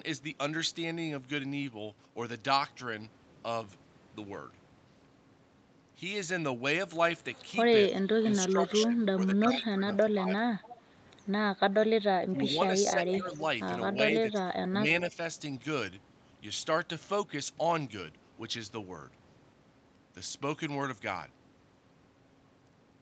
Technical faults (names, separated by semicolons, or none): speech suppressed in double talk; echo leak